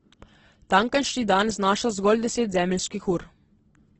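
Throughout the clip the speech sounds heavily damaged, rough and grainy, with nothing above 8.1 kHz. A spectrogram shows a hard ceiling there and noisy, filled-in bands below it. This is likely Opus compression in CELT mode, pointing to a bitrate near 12 kbps.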